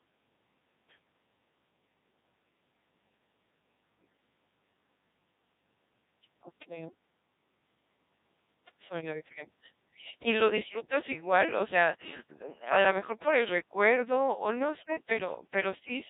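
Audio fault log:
throughout: Codec 2 vocoder. The speech is heavily degraded into a robotic, buzzy tone. The decoder does not carry the original waveform. It rebuilds each frame from sine waves using only pitch, voicing, energy and a coarse spectral envelope, so natural texture and breathiness are lost and the formants sound smeared. The sparse, synthetic character fits a rate of around 1.6 kbit/s, which leaves very little detail per frame.
14.8–15.1 s: bit errors on digital voice radio. Just after "o no", the synthetic voice breaks up for about 0.3 s, jumping abruptly in pitch, level and tone colour and dissolving into warbling, bleep-like gibberish. At such a low bitrate, each bit steers a whole frame's pitch, energy, voicing or spectrum, so a few flipped bits corrupt entire frames. The span fits roughly six damaged frames and a bit error rate of around 5 percent.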